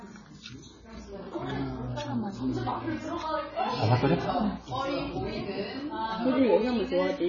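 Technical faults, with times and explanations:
Throughout, AAC compression: nothing comes through above about 7 kHz, so the whole thing sounds dull and boxed in, and the remaining detail is smeared, with a watery, warbling shimmer on sustained parts and a fizzy edge on noisy ones. That's likely AAC-LC squeezed hard, with damage this heavy pointing to something around 16 kbps. At that rate the encoder pulls its cut-off down and starves or fakes whole bands, and those holes and substitutes are what you're hearing.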